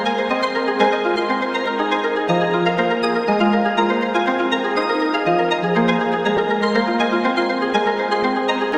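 At 6.37 s there is a brief dropout from lost LE Audio frames. About 10 ms of audio went missing over the Bluetooth LE Audio link, which fits a single lost LC3 frame. The decoder filled the gap by repeating the previous frame's spectrum with randomised phase signs. With only one frame concealed, no fade-out occurs. The result is a short noisy smear in the sound, heard as a grainy blip.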